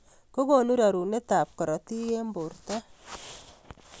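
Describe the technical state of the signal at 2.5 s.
At 2.5 s the speech signal is intact, with no audible technical fault at that moment.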